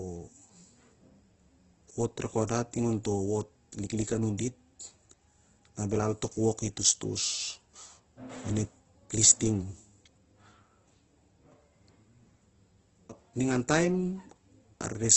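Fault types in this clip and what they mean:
Opus compression: Heavy grainy roughness with nothing above about 8.1 kHz, likely from Opus at a very low bitrate, which fills starved bands with noise.
pre-echo: A brief hiss at 2.47 s softens an attack, as quantisation noise sized for the loud onset spreads into the quiet moment before it.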